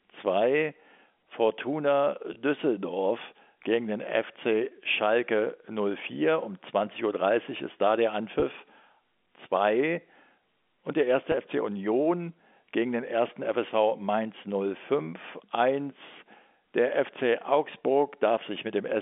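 Three brief packet-loss dropouts with pitch repetition, at 2.34–2.36 s, 8.40–8.42 s and 11.32–11.34 s. Each gap is about 20 ms, consistent with a single lost packet. The receiver fills it by repeating the last pitch period, so you get a tiny held, buzzy blip over the narrow telephone-band G.711 sound.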